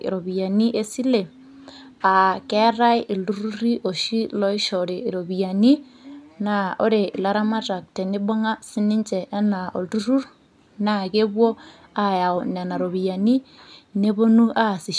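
Listening to the speech recording turned up nothing that stood out.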